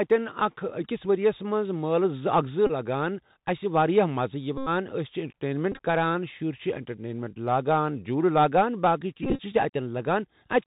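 Throughout the speech, the Bluetooth CVSD headset codec squeezes everything into a narrowband link: one up-or-down bit per sample at 64 kHz with an adapting step, so nothing above 4 kHz survives. Loud, bright sounds overrun the step and distort, s sounds turn scratchy, and a grainy hiss sits underneath.

Bluetooth headset packet repeats follow as the link drops voice packets and the chip re-decodes the previous packet's bits. In a run, the repeat every 3.75 ms produces a buzz near 267 Hz. This happens from 2.67 to 2.71 s (about 26 ms lost), 4.58 to 4.69 s (90 ms, a solid buzz), 5.72 to 5.79 s (49 ms scattered over 83 ms, runs up to about 15 ms), and 9.23 to 9.40 s (101 ms across 165 ms, runs up to about 30 ms).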